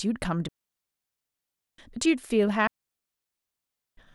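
At 0.48 s the speech drops into near silence and stays there until 1.78 s. This is a digital wireless dropout. The radio link lost too much data, so the receiver muted the audio for 1.3 s. The fade into the mute is very short. No burst of noise comes before or after, just a clean hole. The same fault returns from 2.67 s to 3.97 s, again lasting 1.3 s.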